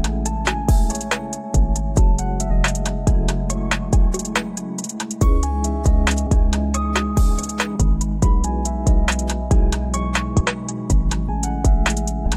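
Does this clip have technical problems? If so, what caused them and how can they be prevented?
Yes. Compressed frames skipped at 2.47, 6.23, 7.71, 10.36, 11.24 and 12.22 s. At each point the audio jumps ahead by roughly 0.2 to 0.3 s, a whole number of 46.4 ms frames that were missing or rejected by the decoder as damaged. Prevent this by checking file integrity after transfer and using reliable, error-checked storage and delivery.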